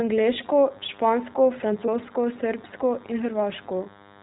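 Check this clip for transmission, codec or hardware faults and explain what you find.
Three things stand out: iLBC coding throughout, a DECT buzz from early on, and two short dropouts.

The whole speech clip has gone through the iLBC codec. Everything above 4 kHz is gone, and the coding damage is plainly audible: a slightly rough, synthetic edge on the voice. The character fits the 15.2 kbps mode, which codes each 20 ms block of excitation on its own.

From 0.44 s to the end there's a DECT cordless phone buzz, a thin, steady 100 Hz drone full of harmonics, sitting about 25 dB under the speech. A nearby handset or base fires a radio burst every 10 ms, and the audio circuitry rectifies it into sound.

There are lost iLBC frames at 1.86–1.90 s and again at 3.84–3.87 s. Each gap sounds like a brief held, buzzy vowel, which fits a single 20 ms frame being concealed by repeating the last pitch cycle with noise. 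Because iLBC frames stand alone, the voice snaps straight back afterwards.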